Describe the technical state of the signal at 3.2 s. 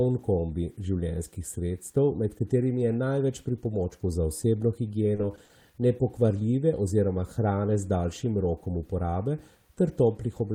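At 3.2 s the speech signal is intact, with no audible technical fault at that moment.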